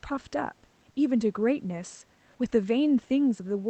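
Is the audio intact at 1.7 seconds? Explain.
Yes, the speech at 1.7 seconds is intact, with no dropout, glitch or other fault at that moment.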